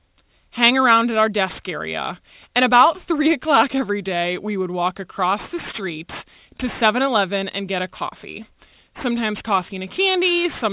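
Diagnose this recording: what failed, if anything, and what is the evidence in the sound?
Aliasing at sample-rate conversion, throughout: with no anti-alias filter, sibilants fold back around 4 kHz into gritty, metallic tones about 20 dB down, rather than simply sounding dull as with clean low-pass filtering.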